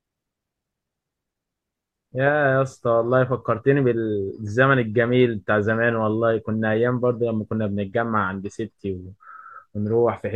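A short stretch of speech with nothing technically wrong to point at anywhere in it.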